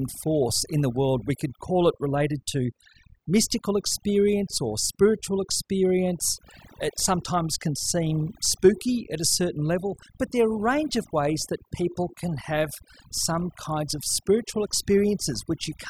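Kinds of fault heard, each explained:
Overdone noise removal: a noise reduction stage was pushed far too hard, cutting any frequency band that sat near its noise estimate. Throughout the speech the background drops and breaks up into twinkling specks, and the voice loses its quieter parts as they vanish with it.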